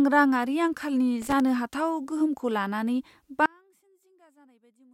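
From 1.22 to 1.40 s, just after "रांङारि आंखालनि", a loose connector crackle cuts through the speech: a worn or dirty contact is making and breaking rapidly, chopping the signal into an irregular scratchy burst, with pops where any DC offset on the line is switched.

At 3.46 s, following "गोहोमखौ लानानै", the speech suddenly drops by about 35 dB and stays faint to the end. The likely cause is one channel inverted: with reversed polarity, the centred content common to both channels cancels when summed to mono, leaving only their small difference.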